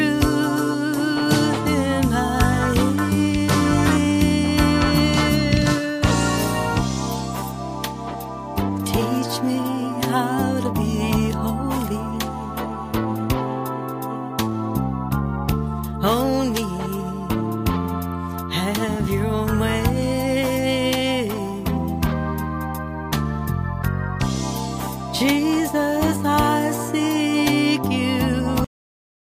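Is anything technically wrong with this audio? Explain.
Yes. At 28.64 s the sound stops dead in the middle of what it was doing and falls straight to digital silence, with no decay or tail, and that silence holds for the remaining 0.57 s. This is a cut-off end: the final stretch of audio was never written out or played back, so the last buffers simply went missing and the recording ends abruptly instead of finishing the sound it had started.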